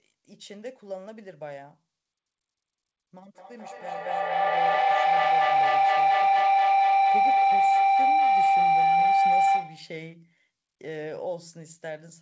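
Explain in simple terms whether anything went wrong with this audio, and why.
A loud, rising whistle around 700 Hz takes over the speech from 3.33 s to 9.98 s, pulsing about five times a second. This is feedback howl: two devices on the call shared a room, so sound looped from loudspeaker to microphone, growing louder each trip.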